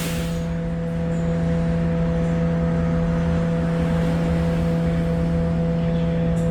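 Throughout, the sound has a rough, grainy, noisy texture, likely from Opus compression in its music (CELT) mode at a low rate, around 24 kbps. Starved bands are filled with noise or folded copies, so a spectrogram shows few holes but smeared, speckled detail reaching about 20.1 kHz.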